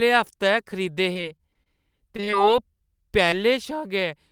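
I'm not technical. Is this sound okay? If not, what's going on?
No. The speech breaks up in two stretches and has one tiny glitch later on.

From 1.13 to 1.79 s, and again from 2.17 to 2.34 s, you hear repeated packet loss, the choppy, robotic kind. Bits of the call kept arriving too late or not at all, and the receiver papered over each hole by stretching out the sound just before it. In the first stretch there are about five such holes, none longer than 30 ms, and about a fifth of the stretch is patched-in sound. The second stretch is shorter but worse: roughly four holes in under two tenths of a second, with nearly half of it filled in. Because the patches come in quick succession, the voice turns buzzy and mechanical, with small pieces missing.

At 3.30 to 3.34 s there is a single short concealed packet loss. Here only one brief slice, about 20 ms, went missing, and the receiver filled it by continuing the preceding sound before blending back into the real audio. 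It comes across as a quick smear or wobble, and a short consonant could drop out. What sets it apart from the robotic stretches is that it is one isolated patch, not a rapid run of them, so the voice never takes on that mechanical, choppy quality.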